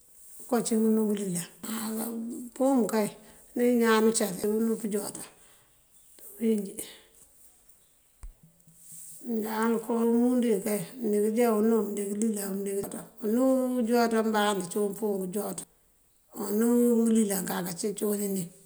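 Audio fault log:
1.64, 4.44, 7.24, 12.84 and 15.64 s: audio missing between chunks. Abrupt skips drop about a fifth of a second, likely lost at each 3-second chunk handover.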